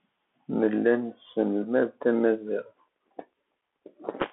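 Throughout, a Bluetooth CVSD headset codec, fitting a 64 kbps one-bit stream, removes everything above 3.8 kHz, leaving the speech narrow, with scratchy s sounds and granular hiss.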